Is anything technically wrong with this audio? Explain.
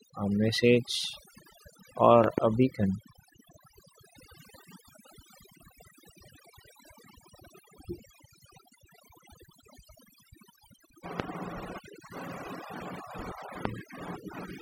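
Yes, there are two problems. Overdone noise removal runs throughout. Frequency bands near the noise level are pulled far down, taking quiet speech with them. The background becomes near-silent with twinkling specks.

A loud pop occurs as a double pop at 2.24 to 2.40 s, peaking about 15 dB above the speech. Single pops follow at 11.20 to 11.22 s and 13.65 to 13.68 s, each about 20 dB above. A sudden voltage step, likely from a plug, switch or static, sits on top, while the speech continues underneath.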